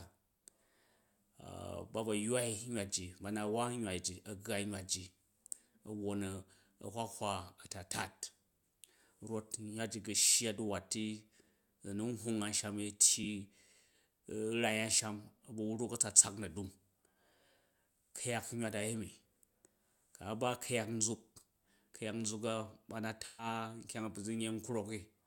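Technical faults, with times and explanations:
13.23–13.25 s and 23.26–23.46 s, AAC frame loss with concealment: the decoder lost coded audio and patched it by reusing the last good spectrum. At 13.23 s a gap of about 21 ms, one frame's worth, becomes a brief smeared, phasey blur. At 23.26 s a 128 ms gap, which fits about six lost frames, decays toward silence and fades back in. Unlike a plain dropout, neither gap cuts abruptly to digital silence.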